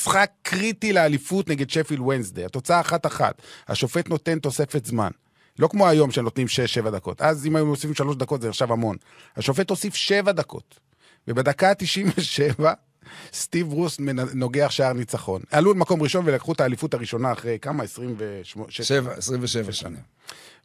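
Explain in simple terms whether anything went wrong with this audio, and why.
Nothing went wrong here: the recording of speech runs without any dropouts, glitches, distortion or other technical problems that a listener could point to.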